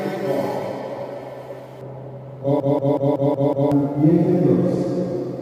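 From 1.81 s to the end the audio is dull and muffled because of de-emphasis applied wrongly: a treble cut was applied to material that didn't need it, leaving the top about 11 dB down at 10 kHz relative to 1 kHz. Unlike a low-pass filter, there is no sharp cutoff, only a smooth, gradual slope. From 2.60 to 3.72 s a system hang loop produces a machine-gun stutter. A single 186 ms fragment repeats exactly six times at 5.38 Hz while playback stalls, which fits an 8192-sample ring buffer cycling on its own, and roughly a second of audio is lost. A dropout would leave silence, and a loose-connection glitch would vary, but here the identical fragment recurs at a fixed rate.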